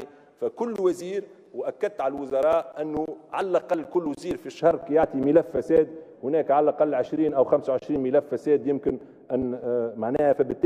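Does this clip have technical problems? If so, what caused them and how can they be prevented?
Yes. From 4.6 s to the end of the clip, de-emphasis was applied wrongly: a treble-cut filter meant to reverse a pre-emphasis boost was run on audio that had no such boost, or was run a second time. The response tilts steadily downward toward the top end, sitting about 11 dB lower at 10 kHz than at 1 kHz, so the sound turns dull and muffled. To prevent this, confirm whether the source was actually pre-emphasised and apply the matching de-emphasis exactly once.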